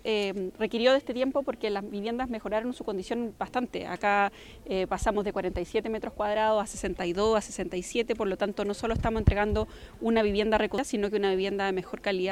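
At 10.78 s the laser loses its place and lands on a different turn of the disc's spiral, a CD skip. The player mutes for a very short moment, only a couple of milliseconds, heard as a tick, and the sound resumes abruptly from another point.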